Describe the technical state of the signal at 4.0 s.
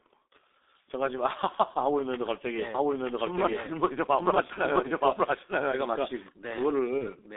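At 4.0 s the speech carries heavy G.723.1 codec damage: a 6.3 kbit/s low-rate coding confined to roughly 250 Hz–3.7 kHz, sounding muffled and hoarse, with an empty spectrogram above 3.7 kHz. A doubled audio track also runs from 2.75 to 6.29 s, likely a second capture path lagging about one second, at similar loudness, so the waveform shows overlapping, dense, undecaying duplicate patterns.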